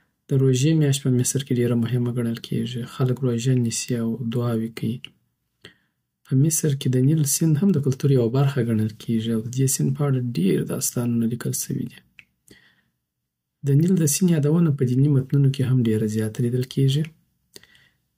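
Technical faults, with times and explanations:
No technical faults detected.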